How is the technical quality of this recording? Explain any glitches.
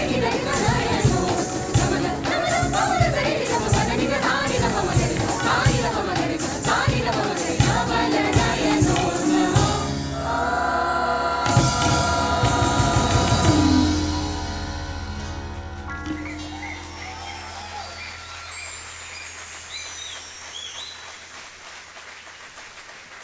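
No glitches or faults can be heard anywhere in the recording.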